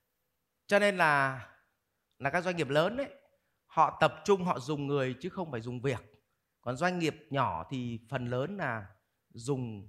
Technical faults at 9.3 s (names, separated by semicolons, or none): none